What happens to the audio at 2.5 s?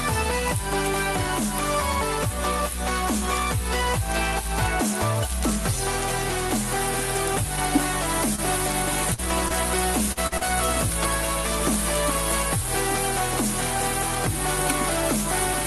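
Nothing goes wrong at 2.5 s: the audio there is intact, carrying only the ordinary character of the Opus call path, with its band topping out near 12 kHz.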